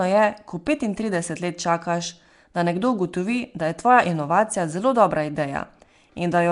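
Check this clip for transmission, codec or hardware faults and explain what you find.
One codec fault runs through the whole clip. The speech has a rough, hissy halo and a smeared, underwater quality, with nothing above 10.6 kHz. This is likely Nellymoser compression. Flash's old microphone codec gives weak bands no bits and fills them with noise, and the damage here fits a rate near 44 kbps.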